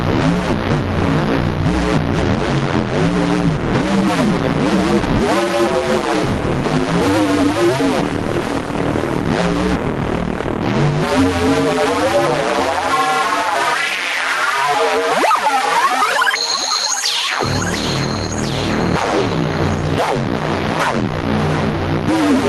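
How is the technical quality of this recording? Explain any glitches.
The recording has gain pumping throughout. The level ducks by around 5 dB under every loud sound, so loud and quiet moments sit squashed close together. The likely cause is gain set far too high with a fast limiter or compressor pulling it back down. A noise gate would instead cut the background to silence in the gaps. The call codec's top end stops near 12 kHz.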